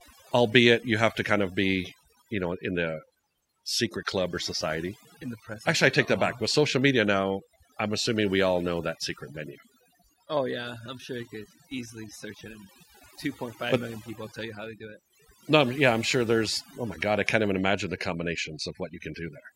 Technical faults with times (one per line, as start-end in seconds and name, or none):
0.00-19.55 overdone noise removal